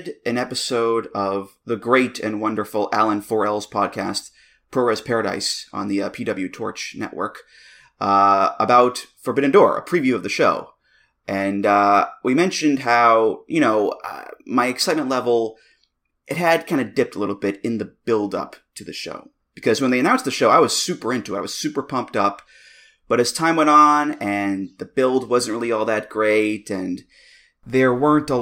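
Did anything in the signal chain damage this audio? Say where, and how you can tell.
Yes. Faint hiss rides on loud, bright speech and vanishes in pauses. This is sample clock jitter at the converter: mistimed samples err most on steep waveform slopes.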